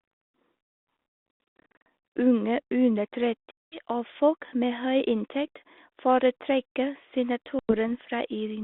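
Speech over a G.726 ADPCM line. The band runs from about 250 Hz to 3.6 kHz, and the light coding noise fits 32 kbit/s. Packet loss on an ADPCM call cuts hard-edged silent holes. The first, at 1.44 to 1.86 s, is a scatter of gaps, the longest 90 ms. The second, at 3.52 to 3.80 s, ends just before "og folk med høy". The third falls at 7.59 to 7.75 s. After each hole, the decoder's predictor and step size no longer match the sender's. The sound comes back with brief, slight distortion.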